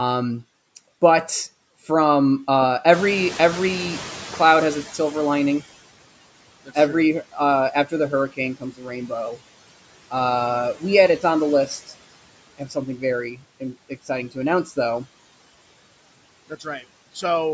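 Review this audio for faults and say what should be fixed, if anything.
Noise suppressor artifacts run through the whole clip. The suppressor pulls down about 18 dB in every band it judges to be steady noise, frame by frame, so the residual background dips between words and swells under them. To prevent this, use a gentler suppression depth and smoother per-band gain changes over time.

The noise suppressor is catching up from 2.92 s to 5.68 s, just after "but from uh". The room noise jumps by about 13 dB around 3.0 s, and the suppressor's noise estimate trails it by about 2.8 s. The louder noise comes through with less reduction at first, then gradually sinks until about 15 dB is being removed. To prevent this, let the noise estimator track sudden increases faster.

Speech is cut by the noise suppressor at 7.73–9.38 s, 12.58–13.03 s, 13.34–14.77 s and 16.49–16.84 s. The suppressor misreads parts of the speech as noise and turns them down with the background, by about 12 to 16 dB at worst. 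Across these spans, the affected parts of the speech sound swallowed or faint for brief moments, a few hundred milliseconds at most in each. To prevent this, set a floor on the gain applied where speech is likely present.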